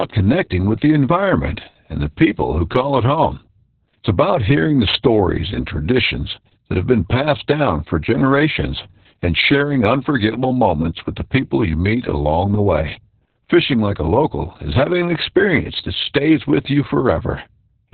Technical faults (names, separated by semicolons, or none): Opus voice compression